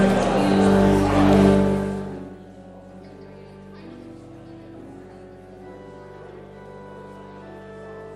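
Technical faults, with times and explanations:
No technical faults can be heard anywhere in the recording. Where the level rises or falls, it moves gradually, the way a fader would.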